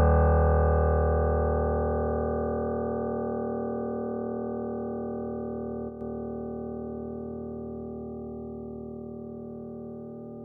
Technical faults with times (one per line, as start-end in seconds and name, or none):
5.89-6.01 one channel drops out